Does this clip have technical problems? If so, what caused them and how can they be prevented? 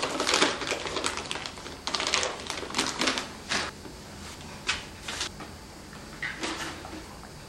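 Yes, compressed frames skipped: at 3.69 s the audio jumps ahead by roughly 0.7 s, and at 5.27 s by roughly half a second, consistent with runs of about ten and seven frames of around 93 ms. Prevent it by checking file integrity and avoiding lossy transfers.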